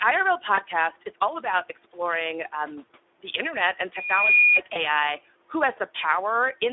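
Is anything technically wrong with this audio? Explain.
Yes, two kinds of fault can be heard.

Speex codec, throughout: the speech sounds hoarse and noisy, with plainly audible coding damage, which fits a Speex bitrate around 11 kbps. Too few bits for the excitation leave grainy harmonics. On a spectrogram, energy is confined to 300 Hz–3.6 kHz, with smeared, fuzzy harmonic lines.

VoIP packet loss concealed by the speech codec, at 0.55–0.60 s, 2.85–2.90 s and 4.73–4.84 s: the decoder fills each gap by repeating its last pitch and filter while fading the level, so the sound briefly stretches into a buzzy tone or coloured noise that fades. The gaps fit roughly one, two and one 20 ms frames. At 4.73 s the distortion lingers about 0.1 s as the decoder recovers. A spectrogram shows frozen, flat harmonic stripes that dim, and the waveform shows a tapering envelope.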